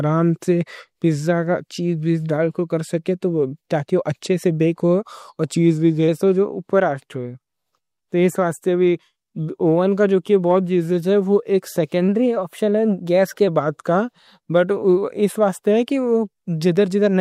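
At 5.55 s the speech suddenly slows by about 6% and drops about a semitone, roughly 108 cents. It holds until 6.08 s, then snaps back. At 12.08 s the opposite happens. The speech speeds up by about 6% and rises about a semitone, roughly 102 cents, until 13.48 s. Speed and pitch move together each time. This is likely a drift correction step: clock-matching software briefly changed the playback rate to refill, then drain, its buffer.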